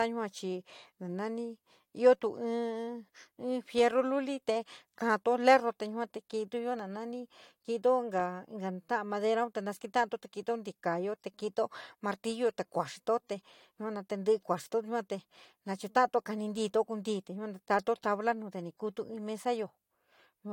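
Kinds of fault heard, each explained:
No faults are heard.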